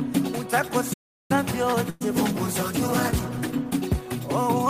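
A playback stall runs from 0.93 to 1.31 s: the output drops to silence for about 0.36 s in mid-flow, then resumes. The likely cause is the player running short of data or its thread being briefly blocked, leaving nothing to send out.

A call audio freeze follows at 1.90 to 2.03 s. The last sound is stretched into a short buzz or hiss for about 108 ms before normal audio returns. The likely cause is delayed packets emptying the jitter buffer; nothing is lost, and everything after arrives 108 ms later.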